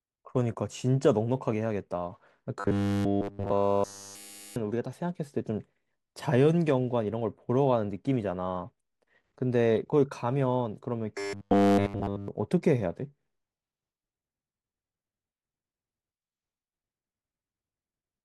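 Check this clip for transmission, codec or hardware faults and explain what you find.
The speech has one fault type, in two stretches: robotic sound from repeated short buffers. It runs from 2.60 to 4.56 s and from 11.18 to 12.28 s. In both, the speech becomes a rigid, metallic buzz at 100 Hz that roughly tracks the words. The likely cause is audio arriving too slowly. Playback loops the last chunk, which fits a 10 ms buffer, while essentially all of the real audio in those stretches is skipped.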